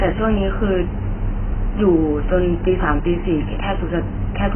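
Throughout the speech, nothing is heard above about 3.1 kHz, and the remaining band sounds dull, smeared and warbly, with fizzy sibilants. This is heavy damage, likely from AAC compression: AAC-LC at a very low bitrate, which fits roughly 12 kbps.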